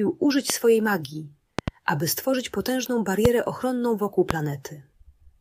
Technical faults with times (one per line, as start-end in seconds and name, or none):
0.50-0.52 loud pop
1.59-1.70 loud pop
3.25-3.27 loud pop
4.31-4.33 loud pop